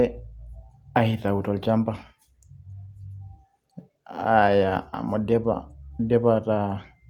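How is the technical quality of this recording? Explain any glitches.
The technical quality of this recording is sound, with no glitches to explain.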